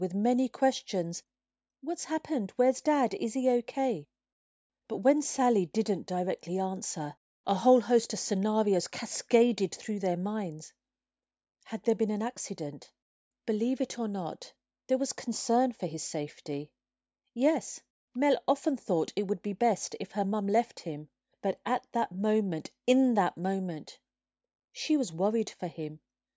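A recording of speech with no technical faults to be heard anywhere in the signal.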